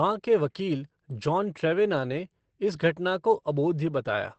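From start to finish the speech carries Opus voice compression damage, and it's easy to hear. Nothing comes through above about 8.4 kHz, so the top end is gone and everything sounds a bit muffled. The SILK linear-prediction coder is approximating the excitation only roughly, which gives the voice a hoarse, slightly robotic edge. All of that fits a wideband SILK setup at a low bitrate, somewhere around 12 kbps.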